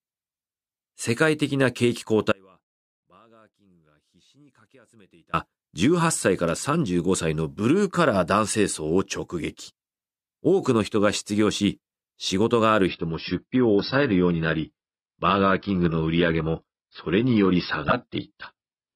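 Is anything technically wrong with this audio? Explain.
Yes, there are two faults. From 2.32 to 5.33 s there is an audio dropout to a faint residue: the speech cuts out abruptly for about 3 s, leaving a faint trace roughly 35 dB down, likely from a signal loss upstream with the path still live. From 12.87 s to the end, the adaptive stream switches to a lower bitrate. Treble above 5.6 kHz disappears and the sound turns thin and swirly, which points to a drop from around 96 to 16 kbit/s AAC.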